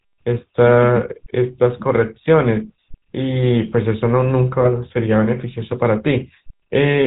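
Right from the start the whole clip carries the sound of the GSM full-rate codec, and it's plainly audible. The speech has that buzzy, gravelly edge you get when a vocal-tract model is excited by a thinned-out train of regular pulses instead of the real waveform. Nothing comes through above 4 kHz, so everything sounds boxed in, with the sibilants dulled. The grain fits the 13 kbps original GSM rate.

Then at about 4.61 to 4.68 s you get a burst of GSM bit errors. Corrupted bits slipped into the decoder's filter, pitch or gain values, so for a moment it rebuilt garbage. You hear a short squawky, gargling pop where the spectrum warps or the level jumps. It's over in about 70 ms, which sounds like roughly three frames. The error rate would be somewhere over 1%.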